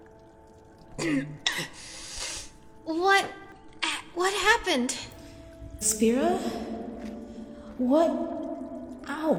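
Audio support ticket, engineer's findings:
Damaged data in a compressed stream: short glitches at 1.43–1.48, 3.52–3.57, 5.78–5.84 and 9.37–9.39 s. Decoder hitting corrupt frames, losing sync, skipping ahead to the next header.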